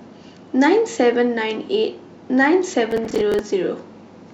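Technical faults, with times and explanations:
2.91 to 3.39 s, processor overload crackle: a gritty burst riding on the speech as the processor repeatedly misses buffer deadlines, each miss replaying a stale fragment with hard edges. The spacing suggests buffers of around 10 ms, with roughly ten missed in succession.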